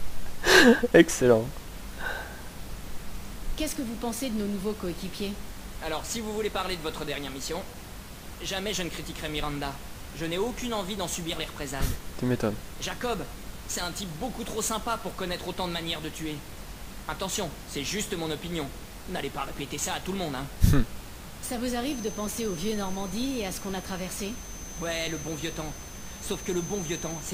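From 21.8 s to the end, a thin feedback whistle at 6.2 kHz, swelling and fading slowly, sits well beneath the sound, likely from a speaker-microphone loop held just short of runaway howl.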